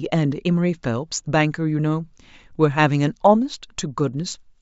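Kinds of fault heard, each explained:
No technical faults heard.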